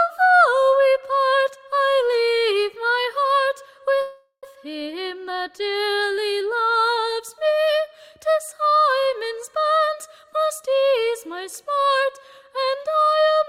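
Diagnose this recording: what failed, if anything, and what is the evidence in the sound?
The failure is at the network stage. From 4.01 to 4.45 s the audio stops advancing: the last sound is carried on as a fading buzz or hiss for roughly 0.41 s, ending in about 90 ms of silence, before the audio resumes exactly where it left off. This is a call audio freeze, likely caused by packets being held up in transit until the jitter buffer ran dry. Nothing is lost, but playback now runs about 413 ms later than before.

A second, much smaller network event sits at 9.03 to 9.07 s: a short stall from a late packet. The sound at that point is held slightly too long, with a slight buzz or dip, and then continues from the same place. One packet missed its playout deadline, so the receiver stretched the previous audio to cover about 26 ms until it arrived. No audio is missing, and the added delay is about 26 ms.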